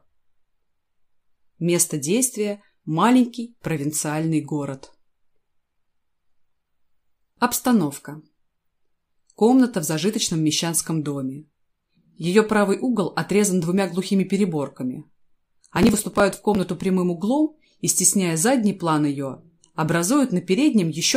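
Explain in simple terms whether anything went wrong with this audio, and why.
Processor overload crackle runs from 15.77 to 16.63 s. For that stretch, the computer making the sound was too busy to prepare each tiny slice of audio in time. The slices seem to be only a few thousandths of a second long, and around twenty of them were missed in quick succession. Each missed slice was dropped entirely, leaving a sharp-edged gap. Strung together, those gaps come out as a gritty crackle over the sound, which stops once the computer catches up.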